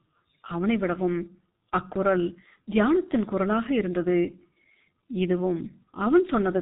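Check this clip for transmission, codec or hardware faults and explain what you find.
One codec fault runs through the whole speech clip. G.723.1 codec damage is heavy throughout: 30 ms frames and a slow voice model blur consonants into a muffled, hoarse sound, which fits a roughly 6 kbit/s rate. A spectrogram shows nothing above 3.8 kHz and smeared transients.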